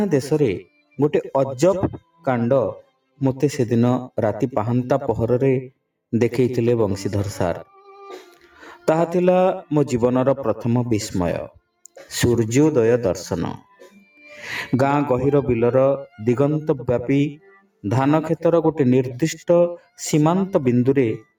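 A noise suppressor built for speech was left active across the whole clip, treating steady or sustained parts of the sound as noise to be removed. Its gain keeps shifting by a few decibels as it decides what to keep, so held material and tails wobble in level, giving a pumping, thinning quality while sharp onsets pass largely untouched.

At six points the suppressor clamps down much harder, producing sound cut by the noise suppressor: 0.64–0.98 s (about 18 dB), 2.00–2.26 s (about 15 dB), 2.82–3.21 s (about 18 dB), 8.30–8.61 s (about 10 dB), 13.61–14.28 s (about 11 dB) and 17.37–17.84 s (about 19 dB). Each time, sustained or decaying sound sinks or has its fade chopped short, leaving brief hollow dips lasting from a fraction of a second to over half a second.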